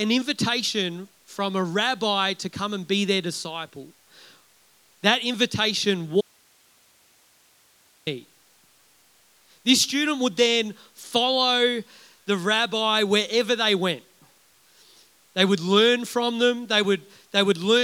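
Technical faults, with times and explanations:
6.21–8.07 s, audio dropout to a faint residue: the speech stops abruptly for 1.86 s, leaving only hiss about 35 dB below the signal, likely from a break in the feed while the path after it stayed live. The waveform shrinks to a thin band, and the spectrogram shows a sharp-edged block of flat noise.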